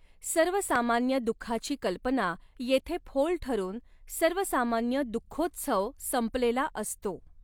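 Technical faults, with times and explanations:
0.76–0.78 s, loud pop: a single sharp pop about 15 dB above the speech, which carries on underneath unbroken, unlike a dropout; likely an electrical step or pulse.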